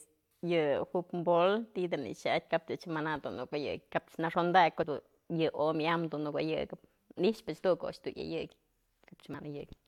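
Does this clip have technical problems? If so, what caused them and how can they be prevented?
Yes. Brief glitches interrupt the speech at 4.83 s and from 9.34 to 9.36 s, both caused by damaged data in a compressed stream: corrupted bytes made the decoder misread those frames and lose sync until it found a valid frame header again. Transferring and storing files with checksums or error-checked delivery would prevent it.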